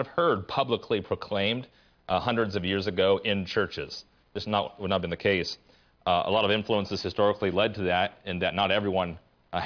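No technical faults are audible anywhere in the recording.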